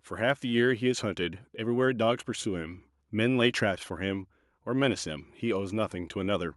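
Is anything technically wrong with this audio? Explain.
No, nothing technically wrong stood out on listening to this speech recording.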